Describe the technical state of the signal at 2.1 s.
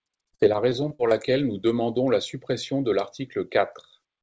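At 2.1 s the speech is intact, with nothing wrong beyond the ordinary band limit of the call path, which passes nothing above 8 kHz, as expected of a wideband G.722 link at 64 kbps.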